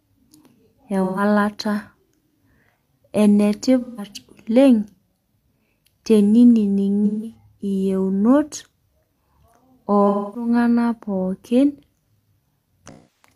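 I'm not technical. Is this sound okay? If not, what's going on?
No. The speech has five brief glitches from AAC frame loss with concealment, at 1.03, 3.81, 7.05, 10.08 and 12.87 s. Chunks of audio went missing, 0.13 to 0.26 s each, and the player patched them by smearing the last good sound, so each spot sounds blurry and noisy.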